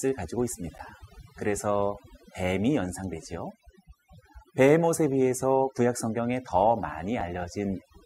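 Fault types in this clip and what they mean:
Overdone noise removal: A noise reduction tool was pushed too hard on a noisy speech recording, so it cuts individual frequency bands way down whenever they sit near its idea of the noise floor. That runs through the whole clip. The gaps between phrases drop to near silence speckled with little twinkling bits, and the softer parts of the voice get shaved off along with the noise.
Underrun with held sample: The output buffer ran dry and the converter just froze on its last value until data came back, so the waveform goes flat for a moment. You get two of these, a 10 ms one at 0.78 s and a 5 ms one at 7.21 s. Nothing seems to have been lost during either, since playback picks up right where it left off, so each is a brief stall with a soft edge rather than a sharp click.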